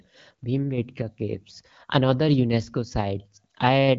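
No technical faults are audible.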